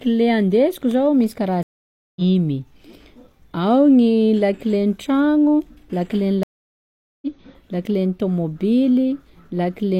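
At 1.63 s the speech drops out for about 0.53 s, and there's a second, longer gap from 6.43 s to 7.27 s of about 0.79 s. Both are stream reconnects: the link broke, the player went quiet, then restarted decoding mid-stream, picking up roughly half a second and roughly 0.7 s further along.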